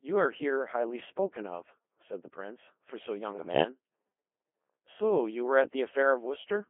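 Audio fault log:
Throughout, Codec 2 vocoder: the speech has a robotic, buzzy quality because the decoder discards the original waveform and rebuilds the voice from sine waves using only pitch, voicing, energy and a coarse spectral envelope. The damage is heavy and the density of detail fits the 2.4 kbit/s mode. The sound is also confined to a narrow band of about 250 Hz to 3.4 kHz, which makes it thin and boxy.
3.32 to 3.64 s, bit errors on digital voice radio: for about 0.32 s the synthetic voice lurches in pitch, loudness and tone colour and breaks into warbling, bleepy gibberish. At this very low rate, each flipped bit corrupts the pitch, level, voicing or spectral settings for an entire frame. The burst is consistent with around 11 frames being hit, at an error rate of a few percent.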